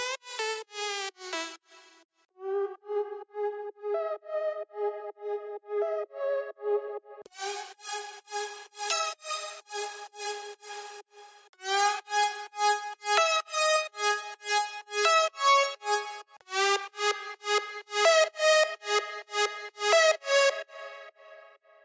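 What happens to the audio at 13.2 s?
Nothing goes wrong at 13.2 s: the audio is intact there, carrying only the normal character of call microphone processing, with no content above 8 kHz and the lowest bass trimmed.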